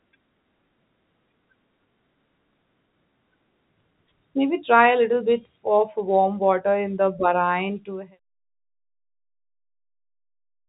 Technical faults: none

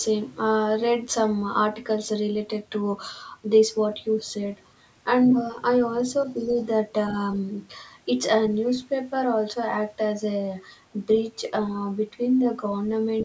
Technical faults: other side's voice leaking through; speech suppressed in double talk

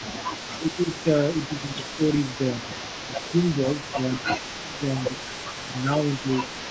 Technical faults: echo leak; speech suppressed in double talk

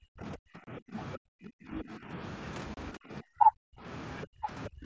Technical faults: speech suppressed in double talk; unconcealed Bluetooth headset packet loss; other side's voice leaking through

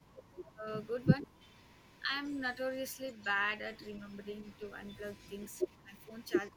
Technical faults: speech suppressed in double talk; echo leak

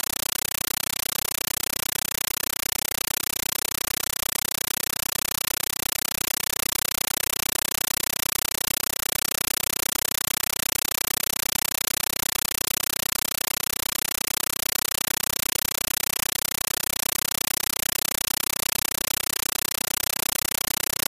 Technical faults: compressed stream played as audio

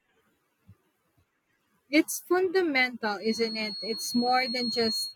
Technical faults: feedback whistle

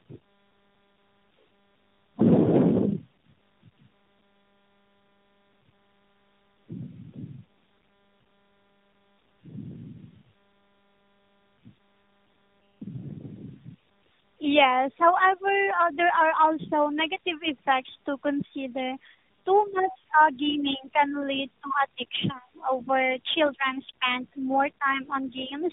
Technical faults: tandem speech coding

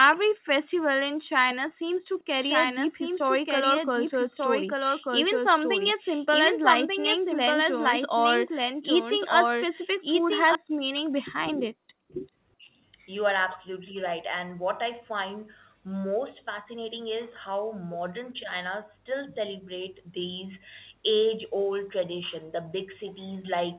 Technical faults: background gated by the echo canceller; doubled audio track; speech suppressed in double talk; echo leak

